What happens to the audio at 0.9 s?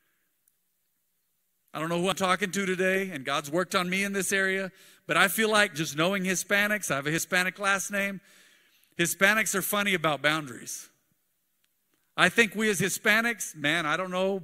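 Nothing goes wrong at 0.9 s; the speech carries on intact through that moment, with no dropout, click or distortion to be heard.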